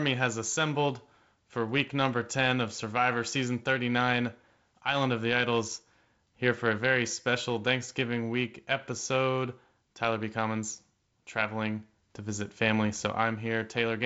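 No faults found in the speech; the G.722 wideband coding at 48 kbit/s stops the band near 7.7 kHz and adds a light hiss.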